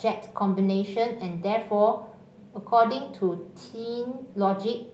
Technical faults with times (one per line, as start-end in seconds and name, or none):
none